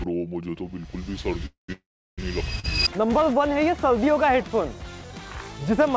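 At 1.46 to 1.70 s and again at 1.72 to 2.20 s, there is a call audio freeze. The last sound smears into a fading buzz and then silence, about 0.13 s and 0.35 s long. The likely cause is delayed packets draining the jitter buffer. The sound resumes where it stopped.

At 2.60 to 2.66 s, a short stall from a late packet holds one sound 40 ms too long, with a faint buzz or dip, before it carries on.

From 3.31 to 4.40 s, a drift correction step likely speeds playback up by 5.4%. The pitch rises about 91 cents, nearly a semitone.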